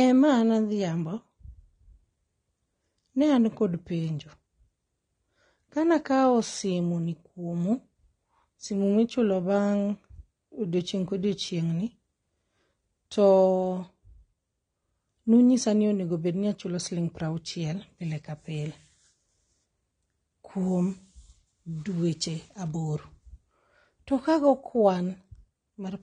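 Speech throughout with plainly audible AAC compression damage: nothing reaches above 9.6 kHz, and sibilants and held sounds carry a warbling, fizzy smear, likely from AAC-LC at a rate around 32 kbps. That texture sets it apart from a simple low-pass filter, which would dull the sound without warbling.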